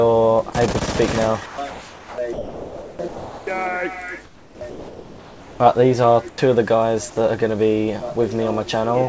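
At 0.50 to 0.53 s the sound briefly gives way to steady noise. This is sound dropped by the voice detector, likely because the sender judged that moment to be background and stopped transmitting while the receiver filled in comfort noise.

From 1.46 to 3.47 s the sound turns choppy, with two or more holes. This is sound chopped by the voice detector, likely caused by the detector switching transmission on and off repeatedly.

From 4.25 to 5.60 s the background loses its detail and becomes a flat, featureless hiss. This is comfort noise in place of the background, likely generated by the receiver during a pause in transmission. It happens again from 6.29 to 6.38 s, where the noise also drops by about 7 dB.

At 6.36 s the returning sound starts abruptly, missing its soft beginning. This is an onset clipped by the voice detector, likely because it was slow to resume sending.

Throughout, nothing is heard above 8 kHz, which fits a wideband call codec.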